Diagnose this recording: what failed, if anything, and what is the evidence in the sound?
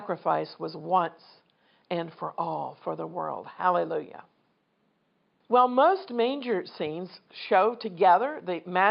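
Nothing in the chain has failed: the speech is intact throughout, and the only other sound is the room's own background noise, about 45 dB below the speech, which belongs to the recording rather than to any stage of the system.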